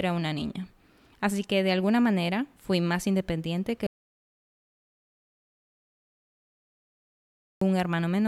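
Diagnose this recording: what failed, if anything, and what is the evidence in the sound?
The speech cuts out abruptly at 3.87 s and snaps back in mid-flow at 7.61 s, so about 3.75 s of it is simply gone. That gap is dead silence, with no room tone or hiss underneath, which is the giveaway for an audio dropout to silence. The recorder kept writing silence while its input vanished, most likely from a disconnected mic or interface, a dropped link, or a mute hit by accident.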